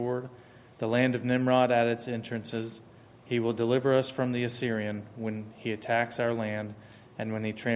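Nothing stood out on listening; no technical fault could be heard anywhere in the audio.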